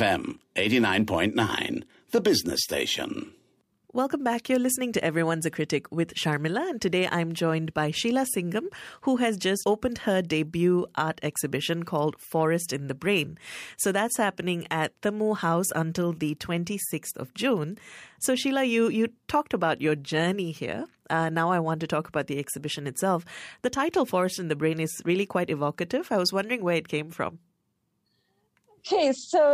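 Nothing goes wrong anywhere in this bit of speech, so there's no technical fault to point to.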